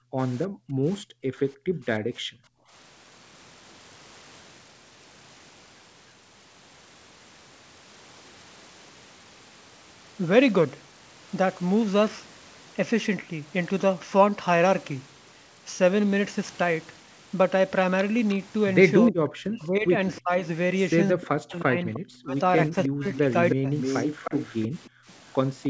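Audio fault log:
0.00–2.72 s and 24.90–25.69 s, background gated by the echo canceller: The room sound drops away hard, by about 40 dB at its deepest. In the opening stretch about two seconds are affected in total. The second dip runs to the end of the clip. The loudspeaker was playing at those moments. The echo canceller clamped the microphone to keep that playback out, so the background vanished with it. It returns only when the canceller releases.
18.28–19.08 s, 20.15–20.21 s and 21.21–25.69 s, echo leak: A delayed copy of the speech trails the original by about 307 ms. In the first two spots it sits about 25 dB under the speech. From 21.21 s it climbs to about 5 dB under the speech and becomes a clearly audible double. The likely cause is a loudspeaker end whose canceller failed to remove its own playback and sent it back down the line.
19.11–23.75 s, speech suppressed in double talk: The talker's speech dips and cuts out in pieces. 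It falls by roughly 40 dB at worst, over about two seconds in total. The other side was speaking during these gaps. The likely cause is the echo canceller mistaking overlapping talk for echo, so it turned down the wanted speech along with the loudspeaker sound. The missing stretches come and go with the far side's speech.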